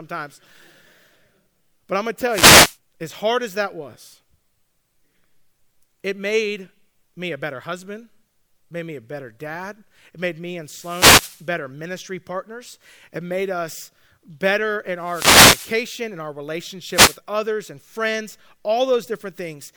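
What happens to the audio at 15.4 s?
At 15.4 s the speech is hit by a wireless microphone noise hit, running from 14.98 to 15.83 s. The FM radio link fades as reflected signals cancel, letting receiver noise rise into the audio as a brief swish or burst of static.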